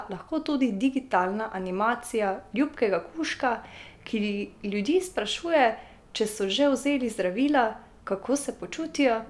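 Listening to the speech recording turned up nothing that stood out as a technical problem.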